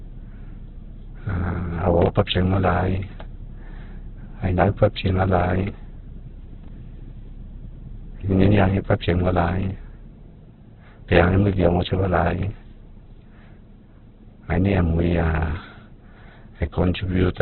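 From start to finish the speech is dull and grainy, with nothing above 4.3 kHz. The rough, noisy texture without watery swirl points to heavy Opus compression as the likely cause, at a very low bitrate around 8 kbps, where bands get filled with noise rather than left empty as MP3 would.

At 2.02 to 2.08 s, chunks out of order produce a brief jumbled stutter. A 20 ms piece plays two chunks late. Unlike a dropout, no sound goes missing; it is only reordered. The same fault returns at 6.64 to 6.68 s, where one 20 ms chunk arrives a single slot late, giving a shorter scramble with sharp joins.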